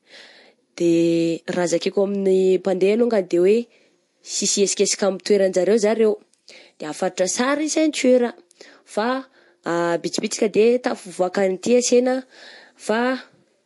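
Throughout the speech, a plainly audible watery, swirling smear sits under everything, with nothing above 11.3 kHz. That fits likely MP3 compression starved of bits, around 48 kbps.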